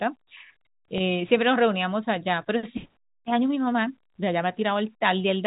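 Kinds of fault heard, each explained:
Packet loss with pitch repetition: around 0.98 s, a gap of about 20 ms, likely one lost packet, is filled by a repeated pitch period, giving a brief buzzy hold instead of a silent dropout.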